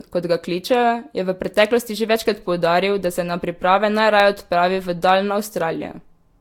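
The speech has likely been through several Vorbis encode-and-decode passes at around 72 to 74 kbit/s, each requantising on a shifted frame grid. This generation loss leaves a swirly, hollow, smeared quality with softened attacks, and nothing above 19.4 kHz.

At 4.20 s, between "da se na priprave" and "odpravi v", the playback device ran short of fresh audio and replayed its last buffer once, a piece about 1.45 ms long, which fits a 64-sample buffer. This repeated buffer is heard as a tiny click where roughly a millisecond and a half of audio goes missing.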